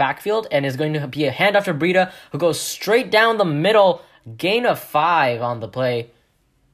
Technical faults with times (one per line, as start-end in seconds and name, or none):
none